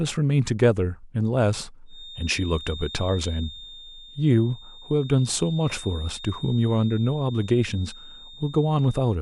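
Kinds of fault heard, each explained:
Feedback whistle: From about 1.84 s to the end, a thin, steady tone near 3.7 kHz sits roughly 20 dB below the speech, swelling and fading slowly in level. It is likely a loudspeaker-to-microphone loop held just at the edge of feedback, sustaining one frequency.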